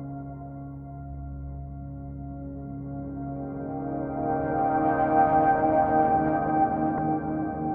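A brief glitch cuts into the music from 6.95 to 6.99 s. It is damaged data in a compressed stream: corrupted bytes made the decoder misread those frames and lose sync until it found the next valid frame header.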